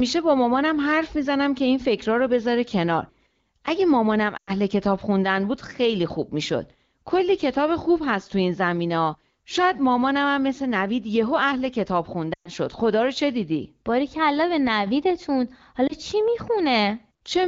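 Lost AMR speech frames at 4.38–4.52 s, 12.33–12.50 s and 15.87–15.92 s: the wideband decoder repeats stale settings at falling gain, so the speech smears and fades. On a spectrogram, the harmonics freeze into flat bands that thin out. The waveform envelope decays.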